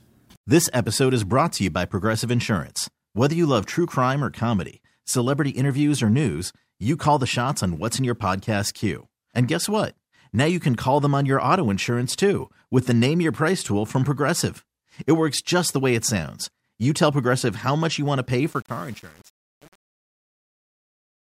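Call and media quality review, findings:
Truncation distortion on the fade-out, 18.49–21.38 s. Tail turns gritty near the bottom. Probable component: fade or gain stage without dither. Too few bits kept, consistent with about 7-bit resolution, so low levels collapse into coarse square steps.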